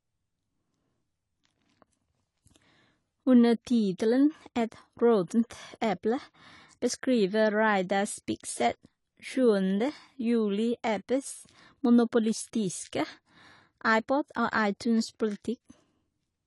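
It's a speech clip, and the whole thing carries plainly audible AAC compression damage: nothing sits above about 11.4 kHz, so the top end is gone and the sound comes across dull and a bit smeared, with that fizzy, warbly edge on sibilants and held sounds. That's likely a low-bitrate AAC-LC encode, the kind of result you'd expect from something around 32 kbps, where the encoder drops the cut-off and starves the upper bands to save bits.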